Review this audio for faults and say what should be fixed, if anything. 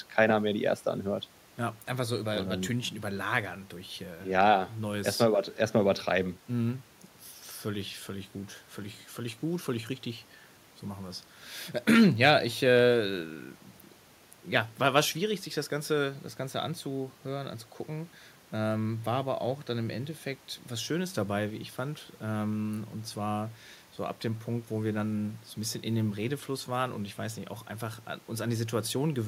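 Nothing needs fixing; no faults were found in the speech.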